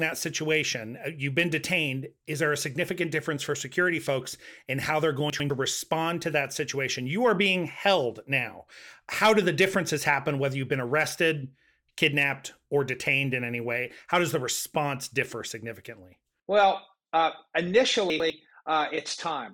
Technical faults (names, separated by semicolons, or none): chunks out of order